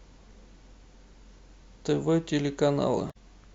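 Speech recording with damaged data in a compressed stream from 3.07 to 3.16 s: corrupted bytes throw the decoder out of sync, producing a brief garbled blip in the speech.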